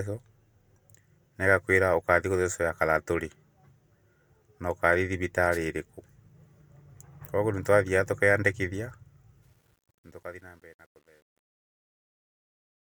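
At 5.51 to 5.58 s a wireless microphone noise hit cuts through the speech as a brief swish of static. The radio link of the FM transmitter momentarily faded and receiver noise rose over the signal. It is hiss-like and over in a fraction of a second, unlike a digital dropout's abrupt silence.

From 9.43 s to the end at 12.91 s, the fade-out that begins around 9.4 s carries truncation distortion. The fade appears to have been processed at only about 10 bits with no dither, so the quietest part steps coarsely. From 10.1 s onward it turns gritty rather than thinning into smooth noise as a dithered fade would.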